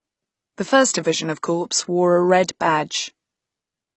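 From start to finish the speech has nothing above about 8.1 kHz, with a dull top end. This points to low-bitrate audio saved at a high bitrate: likely a low-rate AAC encode, around 24 kbit/s, re-saved as a roomy MP3 near 195 kbit/s. Unlike a simple low-pass filter, the coding artefacts of the first encode are present, and despite the large file, none of the missing top band is restored.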